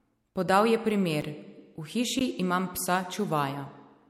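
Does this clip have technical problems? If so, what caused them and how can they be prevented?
Yes. The speech has two blocks of digital silence, where short runs of samples were replaced by zeros. The first, at 1.21 s, lasts about 8 ms. The second, at 2.2 s just before "imam psa", lasts about 15 ms. The signal drops straight to zero and returns with no fade. The shorter gap comes across as a tick and the longer one as a tick or dip. Giving the audio processing enough buffer headroom and guarding its calculations against invalid values keeps blocks from being zeroed out like this.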